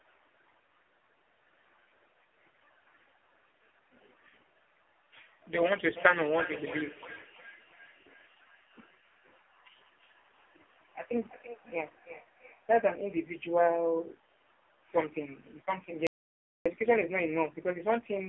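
Throughout, the speech carries AMR narrowband mobile codec damage. Nothing passes above 3.5 kHz, and heavy coding makes the voice buzzy and synthetic, consistent with a bitrate near 5 kbps.

From 5.96 to 12.98 s, feedback echo between two devices appears. Another device replays the other device's microphone audio into the room, so the sound returns roughly every 0.3 s, peaking about 15 dB below the speech.

From 16.07 to 16.66 s, an audio dropout to silence cuts the sound for 0.59 s into silence with no room tone, likely from a briefly lost input.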